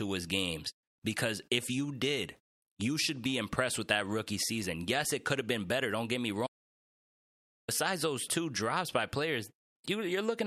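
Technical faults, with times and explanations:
6.47 to 7.68 s, audio dropout to silence: the input feed was likely lost for about 1.2 s while recording carried on writing silence, so the speech cuts off mid-flow into dead silence with no room tone, then resumes abruptly, and whatever was said in between is gone.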